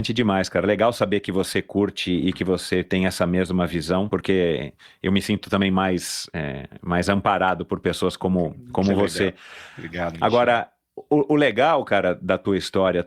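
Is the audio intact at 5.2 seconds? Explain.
No. At 5.2 seconds the speech sits inside a jitter buffer speed-up running from about 4.69 to 5.59 seconds. The receiver's buffer had built up more audio than its target. To drain it, short slices one or a few pitch periods long were cut out repeatedly. That plays the speech about 6% faster, removing roughly 70 ms in total. The pitch stays the same, but this stretch sounds slightly rushed.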